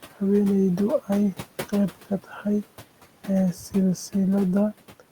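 Noise suppressor artifacts run through the whole clip: the suppressor pulls the steady room noise down by about 12 dB frame by frame, so that noise dips between phrases and swells under the speech. From 2.24 to 2.45 s, speech is cut by the noise suppressor. It mistakes quiet speech for background and turns it down by up to about 12 dB for roughly a tenth of a second in total, and those sounds come out swallowed and faint. The room noise, sitting about 19 dB below the speech, is part of the recording itself.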